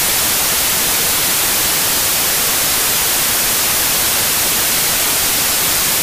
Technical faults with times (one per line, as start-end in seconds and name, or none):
0.00-6.02 samples built from the wrong bytes